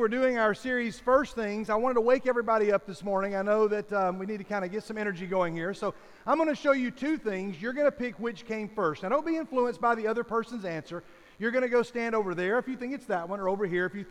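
A nearby DECT cordless phone or base station is transmitting its short radio bursts every 10 ms, and something in the audio circuitry is rectifying them, turning the radio energy into an audible signal. The result is DECT cordless phone buzz running through the whole clip: a steady, thin buzz at 100 Hz, rich in harmonics, sitting low in the mix at roughly 40 dB below the wanted sound but present from start to finish.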